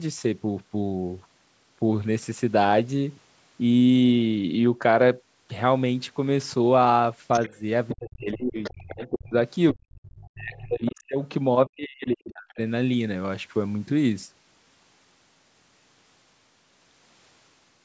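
This speech clip likely suffers from an echo canceller that failed to fully remove the far end's loudspeaker sound from the microphone, so the other side's voice leaks through from 7.33 to 9.06 s and again from 9.72 to 10.92 s. The echo is faint, roughly 20 dB below the talker, but a second voice can be heard under the main one during both stretches. The same canceller, likely unable to tell the talker apart from that echo while both sides spoke at once, pulled the wanted speech down too. This is speech suppressed in double talk. A slight dip of around 5 dB occurs at 7.49 to 7.62 s. Much deeper cuts follow, of up to about 30 dB across 7.95 to 9.33 s, about 40 dB at 9.72 to 9.83 s, about 35 dB across 10.31 to 11.2 s, and about 40 dB across 11.66 to 12.59 s. In these cuts the talker's voice sinks or drops out in pieces. The call's microphone processing leaves nothing above 8 kHz and takes out the lowest bass, which is expected for this kind of call path.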